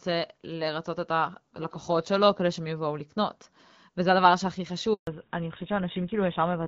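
A handover gap runs from 4.93 to 5.07 s. The call was passed between networks and no speech frames arrived for 140 ms, so the voice cuts off abruptly into silence and whatever was said in that interval is simply missing when the new link resumes.

Fallback to narrowband follows at 5.07 s and lasts to the end. Before it, the HD Voice wideband coding is clear with only light codec damage. Afterwards nothing above 4 kHz survives, which points to a drop onto a GSM full-rate channel, and the voice sounds duller, boxier and rougher.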